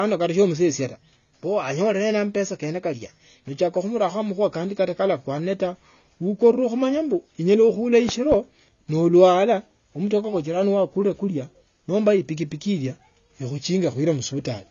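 Throughout the speech, the sound is dull and smeared, with a fizzy, warbling edge on sibilants and nothing above 6.9 kHz. This is plainly audible AAC compression damage, likely from AAC-LC at a low bitrate, around 24 kbps, which cuts the top band and thins the spectrum.

From 8.09 to 8.36 s, two sharp pops land on top of the speech, around 10 dB louder than it, while the speech continues underneath and carries on into "nolwalwa umutokaa kwa". These loud pops likely come from a voltage step or spike, such as a switch or static discharge, entering the signal path.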